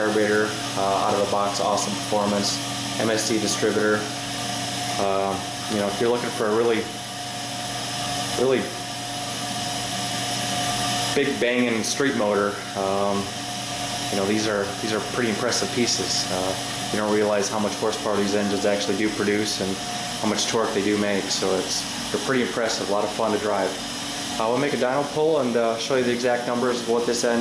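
No technical faults can be heard anywhere in this clip.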